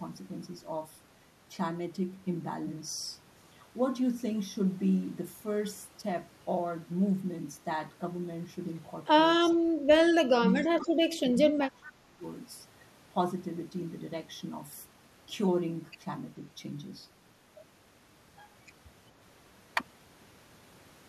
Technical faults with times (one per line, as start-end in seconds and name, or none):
9.53-12.22 speech suppressed in double talk
11.82-11.92 echo leak